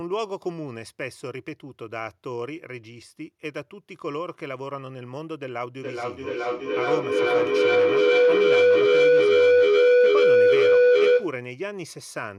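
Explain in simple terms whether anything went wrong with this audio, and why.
Feedback howl starts at about 5.8 s and lasts until about 11.4 s. A loudspeaker's sound kept reaching a microphone and coming back louder each time. It grew into a tone near 500 Hz, with the sound coming back about every 0.4 seconds, louder than the speech.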